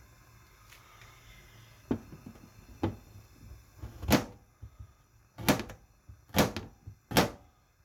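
A recording of everyday sounds with nothing technically wrong to point to. No dropout, distortion or other fault can be heard at any moment in the clip.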